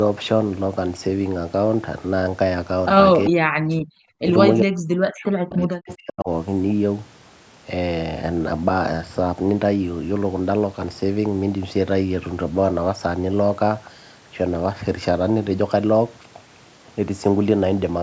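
Speech suppressed in double talk cuts the speech from 3.28 to 3.93 s and 4.62 to 6.29 s, dropping it by about 40 dB, likely because the echo canceller ducked both talkers. Echo leak appears at 5.53 to 5.61 s and 5.92 to 5.96 s as brief scraps of sound repeated 440 ms late, roughly 20 to 25 dB below the speech, likely loudspeaker pickup the canceller missed.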